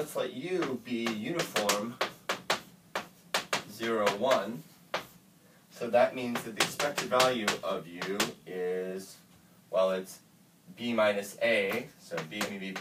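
No dropouts, clicks, distortion or level jumps turn up anywhere along the recording, so there is nothing to flag.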